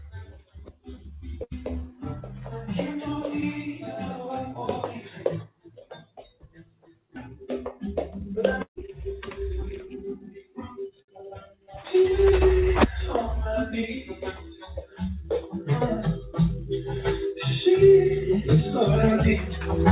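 At 7.16–7.18 s there is a skip ahead: roughly 0.7 s of audio was discarded, and playback jumps straight across the gap with no fill. From 8.28 to 11.57 s a jitter buffer speed-up trims short pitch-period pieces, running the sound at 109% speed and unchanged pitch, removing about 0.3 s.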